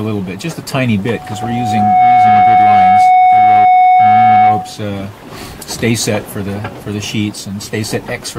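From 1.05 s a single pure tone near 736 Hz rises out of the audio, swelling over roughly a second into a piercing squeal that sits about 10 dB above everything else until it stops at 4.80 s. This is loudspeaker feedback squeal: a microphone was hearing the loudspeaker it fed, and at 736 Hz the round-trip gain topped one, so that frequency kept amplifying itself.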